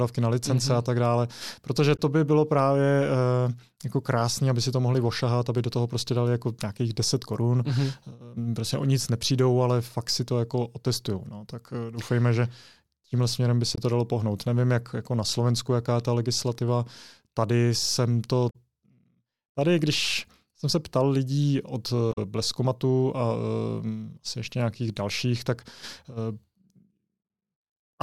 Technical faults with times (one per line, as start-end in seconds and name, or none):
1.95-2.00 damaged data in a compressed stream
13.74-13.78 damaged data in a compressed stream
18.49-18.56 damaged data in a compressed stream
22.12-22.18 damaged data in a compressed stream